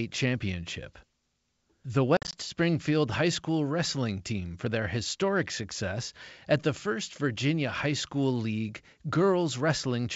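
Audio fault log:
2.17–2.35 s, packet loss on an ADPCM call: about 100 ms of speech vanishes in hard-edged silent gaps scattered across 160 ms, the longest lasting 50 ms, which suggests around ten lost packets. Unlike a simple dropout, each return sounds slightly distorted at first, because the G.722 decoder's adaptive predictor and step size have drifted from the sender's and need tens of milliseconds to resynchronise.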